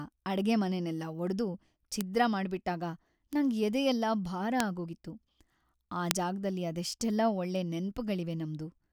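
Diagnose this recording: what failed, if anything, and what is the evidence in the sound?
Bit error spikes occur at 2.01, 3.33 (just before "ನಂಗ್ ಎದೆಯೆಲ್ಲ ಭಾರ ಆಗೋಗಿತ್ತು"), 4.60, 6.11 and 7.56 s. Each is an isolated broadband tick, unrelated to the speech, peaking between about -33 and -2 dBFS. A flipped bit in storage or on a digital link throws one to three samples by a power of two before they return.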